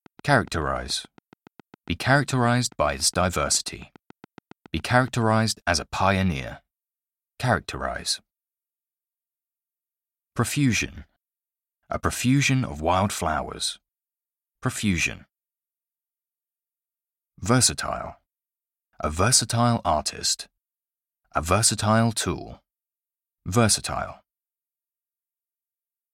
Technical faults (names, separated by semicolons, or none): train of clicks